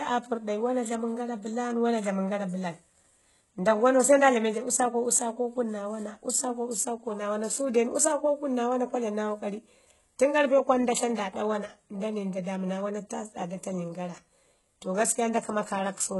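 Throughout the speech, sibilants sound gritty and lispy, the treble has a synthetic metallic sheen, and nothing is present above 11.5 kHz. This likely comes from heavy HE-AAC compression at a bitrate that sounds near 12 kbps, where the treble is rebuilt from copied lower bands whose harmonics don't align.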